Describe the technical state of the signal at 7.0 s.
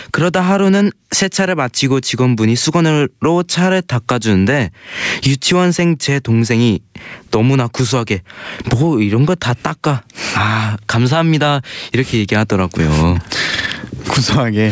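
At 7.0 s loud and soft parts are squashed together; this gain pumping runs through the whole clip, likely from gain set far too high feeding a fast limiter, swinging level by about 25 dB.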